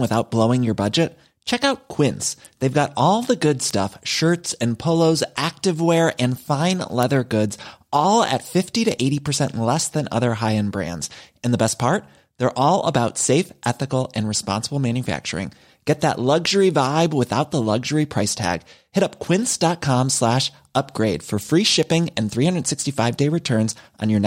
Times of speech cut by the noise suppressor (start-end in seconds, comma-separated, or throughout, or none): none